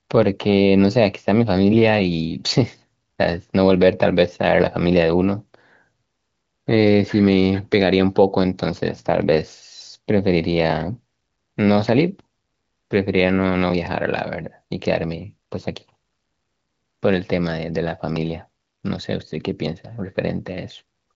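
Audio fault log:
No faults found; the speech runs over an AMR wideband (HD Voice) link at 23.05 kbit/s, with nothing above 7.5 kHz and coding traces faint at most.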